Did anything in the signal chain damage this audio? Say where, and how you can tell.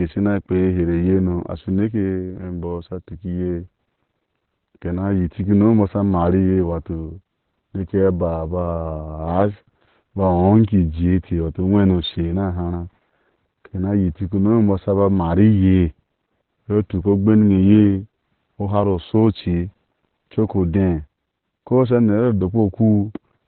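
Yes. Opus voice compression runs throughout the clip, at the codec stage. Nothing survives above 4.4 kHz, and the speech sounds muffled, hoarse and slightly robotic. This points to narrowband SILK near 8 kbps, coding the excitation coarsely beneath its linear-prediction envelope.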